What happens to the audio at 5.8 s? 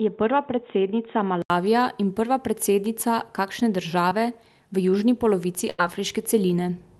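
From 5.70 to 5.80 s the speech hits a burst of packet loss. For about 84 ms the receiver stretches the last sound and fades it, then resumes 80 ms further on with that stretch gone. The held, decaying fill, rather than dead silence, distinguishes it from a plain dropout.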